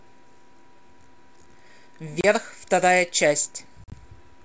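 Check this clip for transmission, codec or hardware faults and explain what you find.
Two dropouts stand out, both from packet loss on an ADPCM call. At 2.21 to 2.26 s the speech cuts to hard silence for 30 ms. At 3.84 to 3.93 s about 60 ms goes missing, broken into gaps over 80 ms, the longest 40 ms. After each hole the speech comes back with slight roughness. The lost packets were filled with silence, so the receiver's ADPCM predictor and step size no longer matched the sender's. The speech only steadies once they realign.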